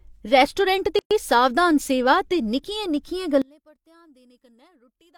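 At 0.99 s the speech drops into a gap at a join of encoded pieces, about 118 ms of silence running to 1.11 s. Two separately encoded segments were butted together with each encoder's start-up delay and end padding left in, so the edges sound abrupt but slightly smeared, and the talker resumes exactly where things stopped.

From 3.42 s to the end, the level summed to mono falls by about 33 dB and the centred speech nearly disappears, leaving a faint residue. The likely cause is one channel inverted: with one side's polarity flipped, everything common to both channels cancels in the sum.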